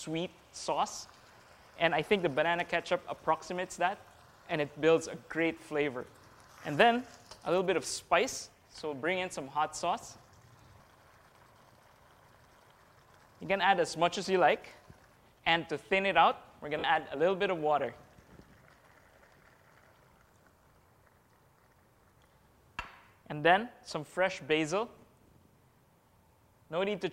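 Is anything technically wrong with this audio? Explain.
Yes, there are two faults.

From 2.60 to 2.62 s there is a single loud pop, peaking about 5 dB above the surrounding audio. A sudden voltage step or pulse, likely from a switch, connector or static discharge, was added to the signal and shaped by the following circuitry. It sits on top of the sound, which continues underneath.

From 16.79 to 16.84 s, 50 ms of lost LE Audio frames, consistent with about five frames dropping out of the Bluetooth link, produce a brief dropout. The LC3 decoder filled the gap by repeating the last spectrum with randomised signs and fading it after the first few frames, so the sound briefly turns into a noisy smear that sags in level.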